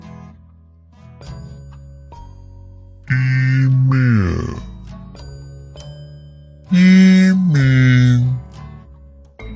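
From start to finish the audio plays at half speed and a full octave low, 12 semitones down, the signature of a wrong sample rate. Samples were read out at half their original rate with no conversion, which fits 32 kHz material played at 16 kHz, so everything drags and sounds heavy.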